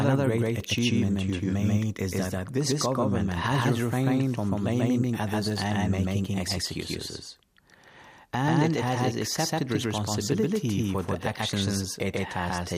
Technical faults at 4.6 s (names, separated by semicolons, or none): doubled audio track